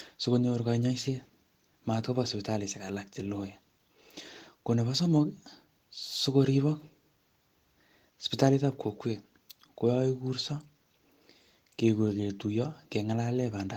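No faults can be heard anywhere in this speech.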